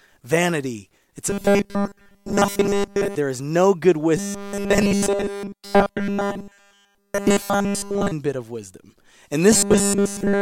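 Speech with robotic sound from repeated short buffers at 1.30–3.16 s after "vanity it's", 4.17–8.12 s between "is no good" and "bit of wisdom", and 9.52–10.42 s after "bit of wisdom". A 5 ms buffer is likely being repeated throughout each span, forcing a rigid 200 Hz buzz. A spectrogram would show evenly spaced horizontal harmonic stripes, and the waveform would show a cycle that repeats roughly.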